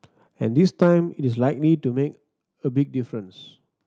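From 0.59 to 0.83 s the loudest part of the speech takes on a harsh, crackling edge. That is microphone overload: the signal ran about 3 dB past full scale, so roughly one percent of the samples in that stretch have their tops cut flat. The likely cause is an input volume set too high for the converter, which squared off the peaks and added the gritty distortion.

Right after that, at 0.83 s, the voice and the background both drop abruptly by about 4 dB. A second drop of about 5 dB follows at 1.83 s. Each is a microphone volume step-down, heard as a sudden dip in loudness with no fade. The likely cause is call software finding the microphone too loud or clipping and lowering the device's input volume in discrete jumps, which lowers everything together rather than just the distorted part.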